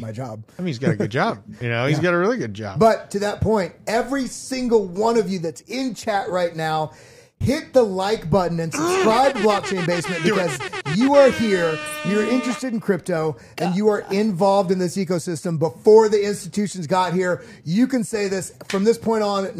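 Nothing goes wrong anywhere in this one, so there's simply no technical fault to point out along the way.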